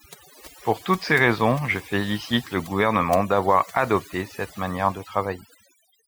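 Right through the clip there's overdone noise removal: the denoiser clamps bands near its noise estimate, leaving twinkly near-silence between phrases.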